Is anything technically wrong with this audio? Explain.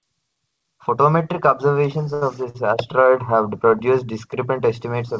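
Yes, there are two short stalls from a late packet, at 2.14 to 2.23 s and 2.49 to 2.56 s. Each time the jitter buffer ran dry waiting on audio, so the receiver held the last bit of speech for about 75 ms and then 50 ms before carrying on. Nothing drops out, but the sound smears briefly with a faint buzz or dip. The call-path band limit at 8 kHz is just how this codec sounds, not a fault.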